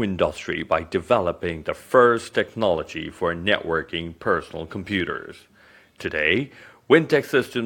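No technical fault can be heard anywhere in the audio, and the signal stays steady and intact throughout.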